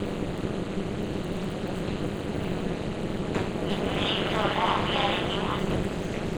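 Overlap-add ripple runs through the whole clip: the sound was split into windowed frames and rejoined with an overlap that fails to sum to steady gain, so the level dips by about 60 dB once per frame, around 200 times a second, giving a harsh robotic buzz.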